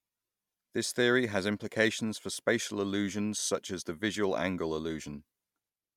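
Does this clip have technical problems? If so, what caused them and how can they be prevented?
No, this clip has no technical problems, so there is nothing to trace to a cause or prevent.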